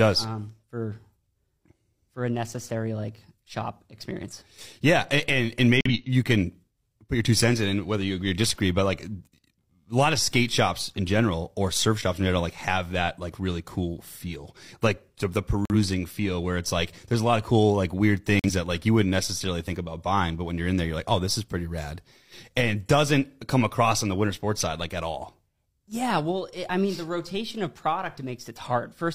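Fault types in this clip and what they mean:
Corrupt frame muted: damaged compressed frames were rejected by the decoder, and the player filled each one with digital silence instead of the lost speech. The dropouts start and end abruptly at 5.80–5.91 s (about 0.12 s, consistent with two consecutive frames lost), 15.65–15.75 s and 18.39–18.50 s (each about 0.1 s, a single frame). Timing is preserved: the speech resumes exactly where it should, with no skip or drift.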